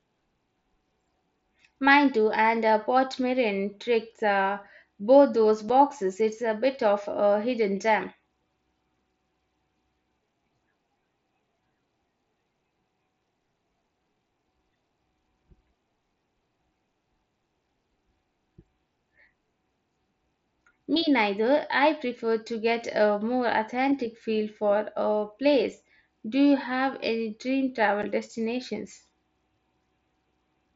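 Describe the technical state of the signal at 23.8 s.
At 23.8 s the signal is intact, with no fault at that moment.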